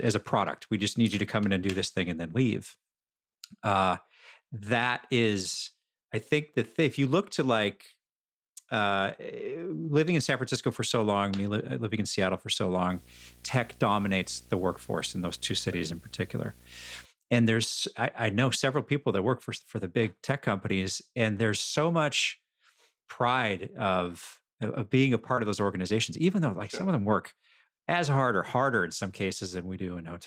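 Speech with three kinds of fault. From 12.9 to 17.05 s, between "for so" and "and there's I I", a video or display buzz at the 60 Hz field rate sits about 25 dB below the speech, with hash above it. A spectrogram shows it as a stack of evenly spaced horizontal harmonic lines. Near 24.77, 24.89, 25.17 and 25.37 s, a lost packet rebuilt from error correction fills each 20 ms gap with a rougher, noisier low-bitrate copy, seen as brief grainy, blurred slices. At 25.35 s, just before "of those", a short concealed packet loss stretches the preceding sound over about 16 ms of a 20 ms hole and then crossfades back into the real signal. It is heard as a tiny smear and appears as a smoothed, repeated patch in the waveform.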